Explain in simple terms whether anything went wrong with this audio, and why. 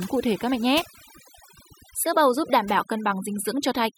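A noise reduction tool was set too strong, which is overdone noise removal. It shuts off any frequency band it mistakes for noise, taking quiet parts of the speech with it, so from start to finish the background drops and breaks up into twinkling specks.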